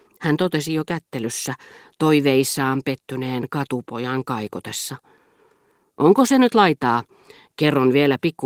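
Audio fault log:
No faults turn up anywhere in this speech clip; what you're hearing is just ordinary Opus voice compression running in its fullband hybrid mode at around 20 kb/s, which leaves only a light touch on the sound.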